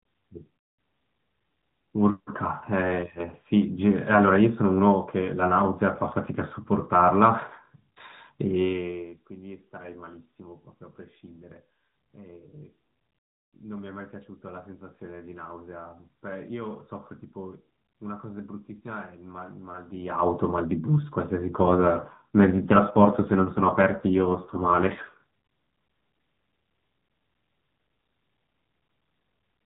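From 21.52 to 25.19 s the speech turns buzzier and more synthetic. That's an AMR rate drop: the mobile link weakens, so the codec spends fewer bits describing the voice and more on protecting them against errors. The sound fits a step down from the 12.2 kbps mode to 5.9 kbps. The band doesn't narrow and nothing drops out, and the rougher texture lifts again once the rate recovers at 25.19 s.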